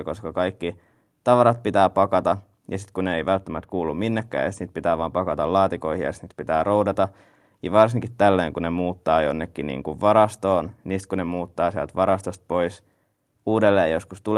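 No audible technical faults.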